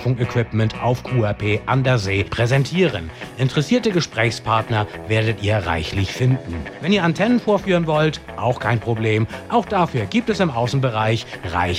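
Nothing in this audio stands out as a technical problem; it just runs along without anything going wrong that a listener would catch.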